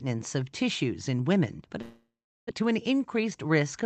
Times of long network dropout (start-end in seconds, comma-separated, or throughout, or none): 1.81-2.60